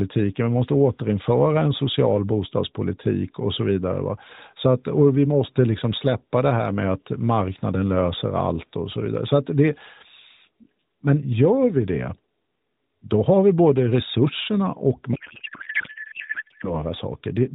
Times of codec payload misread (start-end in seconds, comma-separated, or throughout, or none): 15.14-16.75